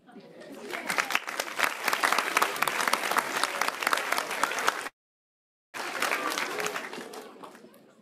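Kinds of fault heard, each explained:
Long network dropout: From about 4.87 to 5.78 s the sound falls away. The last bit gets stretched into a short fading buzz, then it's near-silence for most of that stretch until the audio picks up again. About 0.6 s of material is simply gone. The likely cause is a run of packets that didn't arrive in time, which left the receiver with nothing to play and nothing to recover later.
Jitter buffer speed-up: Right after the dropout, from about 5.86 to 7.95 s, everything plays at roughly 113% speed with the pitch unchanged, so it feels a bit rushed. The delayed packets probably turned up together and overfilled the buffer, and the receiver worked off the backlog by repeatedly trimming tiny pitch-period-sized slices. Altogether around 0.3 s gets shaved out, which brings the delay back to its target.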